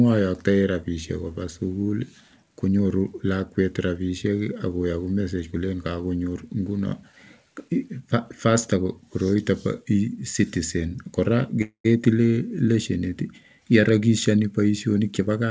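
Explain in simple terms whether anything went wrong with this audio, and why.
Four things go wrong in this speech, all near the end. Like all of the sound, they came through a call link that stops at 8 kHz.

At 11.62 s the sound stalls until 11.86 s. This is a call audio freeze. The last sound trails off into a fading buzz or hiss, with about 90 ms of silence. The likely cause is packets arriving late, so the player ran out of sound. Nothing is lost. The speech simply resumes later.

From 12.02 to 12.05 s there is a skip ahead. The playback jumps forward to catch up. Roughly 70 ms of speech is cut out. The two sides are joined almost directly, with little or no gap.

From 12.38 to 13.23 s there is a jitter buffer slow-down. The player repeats tiny slices of the voice to build up a reserve. That adds 57 ms, so the speech runs at 94% speed. The pitch stays the same, but sounds are drawn out.

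From 14.98 s to the end there is a jitter buffer speed-up. The player had too much sound waiting, so it cut out small slices, roughly 150 ms in all. The speech runs at 124% speed. The pitch is unchanged, but it sounds hurried.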